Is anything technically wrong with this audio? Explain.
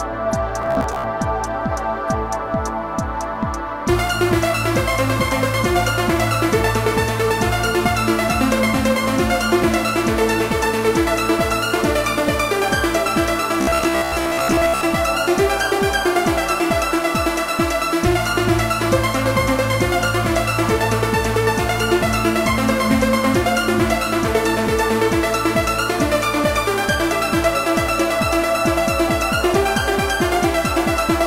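Yes. At 0.62 to 1.04 s and 13.61 to 14.81 s there is robotic sound from repeated short buffers. The audio becomes a rigid metallic buzz at 66.7 Hz. It is likely caused by a 15 ms buffer being replayed, covering about half, then most, of those stretches.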